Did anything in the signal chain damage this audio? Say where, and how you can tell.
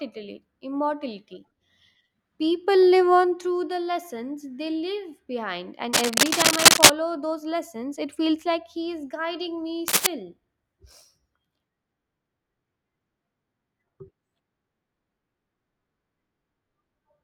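Yes. Cable scratch noise in the analogue wiring breaks into the speech from 5.93 to 6.94 s, well above the speech level, and again from 9.88 to 10.07 s, somewhat above it. Each burst is a dense, irregular rustle rather than a single click or a clean gap. That points to a worn connector or lead being moved, its contact resistance fluctuating quickly. Digital dropouts would instead leave silence or hard, regular ticks.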